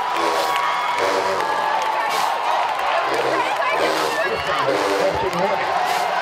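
From 0 to 1.38 s the audio runs fast and sharp, a wrong sample rate fault. The samples are clocked out faster than they were captured, with no conversion, so speed rises by 1.09 times and pitch by about 1.5 semitones, which fits 44.1 kHz material played at 48 kHz.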